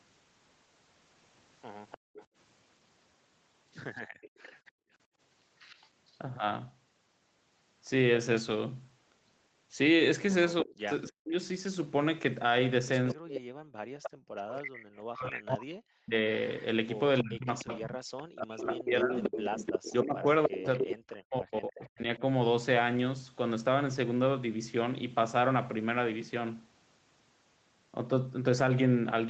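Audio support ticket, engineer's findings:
Echo leak at 1.91–2.25 s, 3.96–6.11 s, 13.09–14.57 s and 16.47–21.89 s: a delayed copy of the loudspeaker side's voice comes back about 305 ms late. Likely the loudspeaker side's echo canceller letting loudspeaker pickup through. It's faint early on (roughly 20–25 dB down) and gets nasty later, only about 5 dB under the speech by the last stretch.

Background gated by the echo canceller at 1.98–2.14 s and 4.07–5.19 s: the room tone drops out while the loudspeaker plays, by about 40 dB and about 36 dB. The canceller clamps the mic hard and then lets go. That's a blink the first time and around half a second the second time.

Speech suppressed in double talk at 10.63–11.34 s and 13.14–22.22 s: the loudspeaker side's talker dips hard, around 40 dB, and cuts out in pieces while the other side talks. It's likely the canceller can't separate talker from echo, so it ducks both. 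About 5 s is lost in the long stretch, which overlaps the worst echo. The band stops at 8 kHz, normal for call mic processing.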